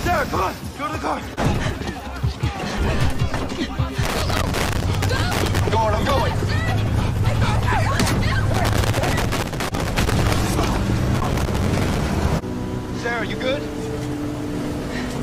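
Loose connector crackle at 4.03 to 5.59 s, 8.54 to 10.34 s and 11.15 to 12.00 s: a worn contact repeatedly breaks the signal, producing irregular scratchy bursts.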